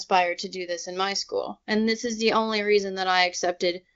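No technical fault is audible in the speech: it has passed through the AMR wideband (HD Voice) codec, with content stopping around 7.2 kHz and coding that sounds like one of the higher rates, around 23 kbit/s.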